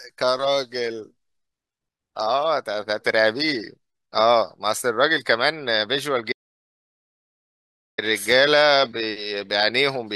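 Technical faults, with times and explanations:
6.32 to 7.98 s, audio dropout to silence: the speech cuts off abruptly and returns just as abruptly about 1.66 s later, with no room tone or background noise in between, so whatever was said in that stretch is simply gone. The likely cause is a lost input, such as a dropped connection or a momentary mute, while recording carried on writing silence. On the waveform this is a flat line, and on a spectrogram a dark vertical band across all frequencies.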